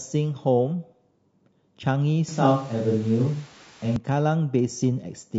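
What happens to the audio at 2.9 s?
From 2.29 to 3.96 s the sound turns roomy and hollow, with thinner bass and more background noise, which likely points to a switch to a distant microphone; the level barely changes. Underneath, the clip carries plainly audible grainy, rough artefacts, likely low-delay AAC compression (AAC-ELD) at something like 32 kbps, which adds noise between the harmonics.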